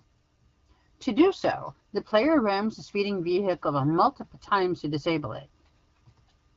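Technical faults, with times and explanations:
Nothing stood out on listening to this speech, which carries the band-limited but clear character of AMR wideband (HD Voice) coding at 12.65 kbit/s.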